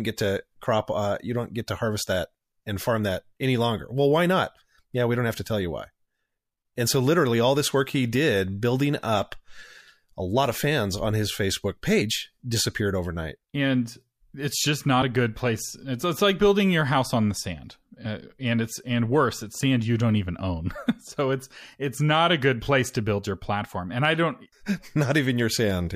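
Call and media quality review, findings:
Brief skips where speech jumps ahead: 12.01 s before "disappeared overnight" (about 100 ms lost), 15.01 s between "it's just" and "a good place", 18.04 s after "house on the sand" (about 30 ms each). Compressed frames skipped in the decoder, fitting whole frames of about 26 ms.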